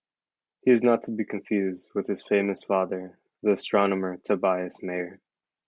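Nothing in the recording stood out as a technical problem on listening.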